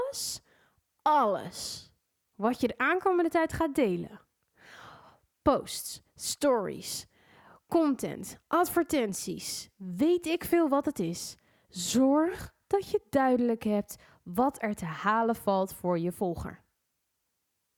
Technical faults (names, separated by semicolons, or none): none